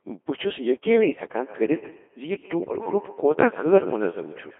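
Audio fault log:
Throughout: Codec 2 vocoder. The speech sounds robotic and buzzy, with a thin, band-limited tone between 250 Hz and 3.4 kHz and heavy damage to anything that is not a single clean voice. The decoder does not keep the original waveform. It rebuilds the speech from sine waves using only pitch, voicing, energy and a coarse spectral envelope. The degree of smearing fits a very low rate of about 2.4 kbit/s.
1.35 s to the end: feedback echo between two devices. From 1.35 s onward each syllable comes back as a faint, ringing copy about a tenth of a second later, at about 17 dB below the speech at its loudest. A second device in the same room is replaying what this microphone sent, and the microphone picks it up again. The local echo canceller cannot remove it because it only subtracts what its own device plays.
2.59 to 2.76 s: bit errors on digital voice radio. For this brief stretch the synthetic speech lurches in pitch, level and tone colour and breaks into a warbling, bleeping gibberish. 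Flipped bits reached the vocoder at a rate of a few percent. At such a low bitrate every bit steers the pitch, loudness, voicing or spectrum of a whole frame, and the damage points to several consecutive frames being hit.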